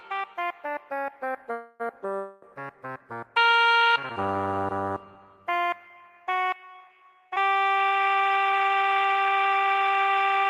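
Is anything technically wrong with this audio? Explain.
Yes. There are two call audio freezes, at 1.52 to 1.82 s and 2.16 to 2.44 s. The sound stalls into a fading buzz or hiss for about 0.28 and 0.27 s, then resumes with nothing lost. Delayed packets likely emptied the jitter buffer.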